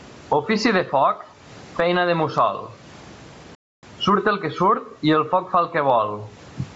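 Right from the start there's gain pumping, with a swing of something like 20 dB. The likely cause is gain set way too high into a fast limiter clamping down on every peak, so the whole thing sounds squashed.

Running through the whole clip there's also Bluetooth LC3 compression, and the damage is plainly audible. The speech has a breathy, grainy sheen up top, where the codec has thrown away detail and filled the gaps with noise. The sound fits LC3 likely running at around 48 kbps with 7.5 ms frames. The lowest bass is taken out, which is just the call's microphone processing.

At 3.55 s there's a playback stall. The speech cuts out dead for about 0.28 s, then picks up again at "surt el que" at 3.83 s. It sounds like the player likely ran dry or got blocked and went silent until it recovered.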